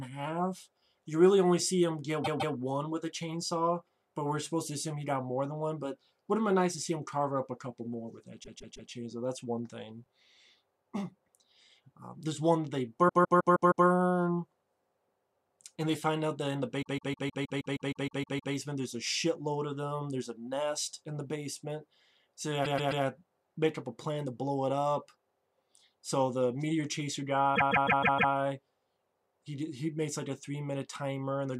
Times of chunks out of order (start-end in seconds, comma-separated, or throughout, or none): 10.04-10.08